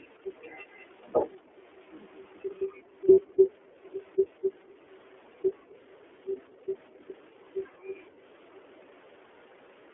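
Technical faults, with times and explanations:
throughout: iLBC codec. Speech sounds slightly rough and synthetic, confined to roughly 300 Hz to 3.4 kHz, from independent 30 ms frames coded at 13.33 kbps.
1.37–1.56 s and 6.50–6.67 s: background gated by the echo canceller. Room sound dips by about 40 dB, then about 29 dB, while the canceller clamps the microphone during loudspeaker playback.
3.12–3.18 s: lost iLBC frames. A brief held, buzzy vowel fills 60 ms as the decoder repeats the last pitch cycle, and speech recovers immediately afterward.
6.94–6.98 s: echo leak. A faint delayed copy arrives about 213 ms late at roughly -40 dB, likely residual loudspeaker pickup the echo canceller missed.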